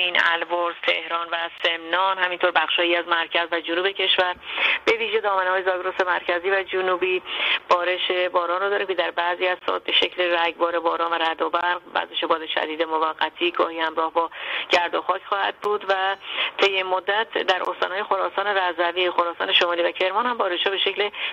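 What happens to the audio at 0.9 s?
Nothing goes wrong at 0.9 s; the audio carries on intact through that moment, with no dropout, click or distortion.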